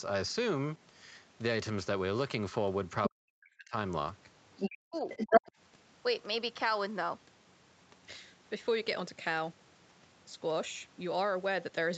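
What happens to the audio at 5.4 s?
Right around 5.4 s you're hearing two overlapping problems. First, the other side's voice leaking through, from 4.95 to 5.41 s. A second voice pops up in the mix, and it's loud, roughly 10 dB above the talker. That's most likely the far end playing out of the talker's loudspeaker and getting picked up by the mic, with the echo canceller failing to scrub it out before it was sent back.

Overlapping that, from 5.26 to 5.52 s, there's speech suppressed in double talk. The talker's own voice gets pushed way down, at its deepest by around 40 dB, so it more or less vanishes in chunks adding up to about a fifth of a second. The likely cause is the canceller seeing both sides active at once, failing to tell the talker from the echo, and clamping down on everything.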